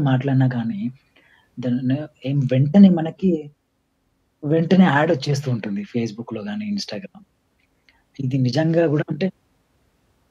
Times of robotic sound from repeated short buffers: none

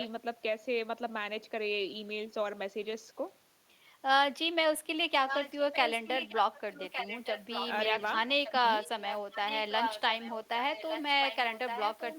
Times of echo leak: 0.00-0.07, 5.27-7.67, 8.44-10.35, 10.73-12.19

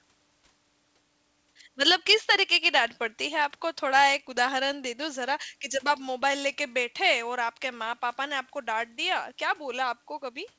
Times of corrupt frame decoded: none

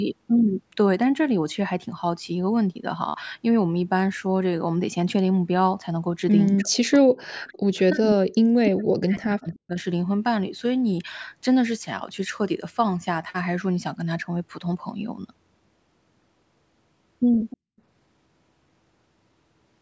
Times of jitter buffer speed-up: none

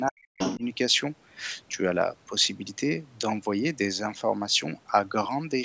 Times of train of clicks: none

